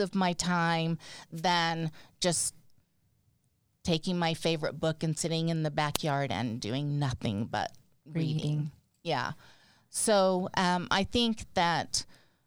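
At 1.35 to 1.43 s, after "my time", and again at 5.94 to 5.98 s, between "and sitting in the" and "and doing nothing but", the speech is hit by a wireless microphone noise hit: the FM radio link fades as reflections cancel, and receiver noise briefly rises, heard as a short burst of static.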